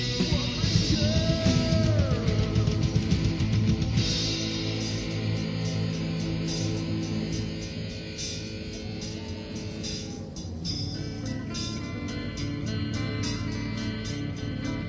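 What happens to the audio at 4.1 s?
Nothing goes wrong at 4.1 s; the audio plays through that moment intact, with no dropout, click or other fault.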